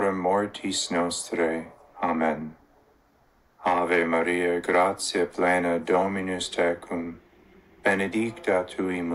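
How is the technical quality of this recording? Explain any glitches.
Nothing here stands out as a glitch; the recording runs along without any dropouts, clicks or other technical hiccups to point to.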